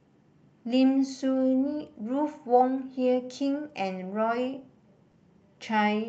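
At 5.11 to 5.15 s the speech shows a short concealed packet loss: about 20 ms of audio never arrived in time, and the decoder filled that 20 ms gap by extending the preceding sound before blending back into the real signal. It comes across as a brief smear or wobble rather than a gap. Unlike a plain dropout, there is no moment of silence, and unlike a click, there is no sharp transient.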